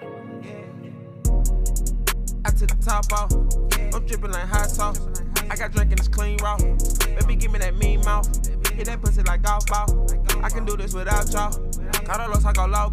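Nothing goes wrong anywhere in the audio; there's no technical fault to point to at any moment.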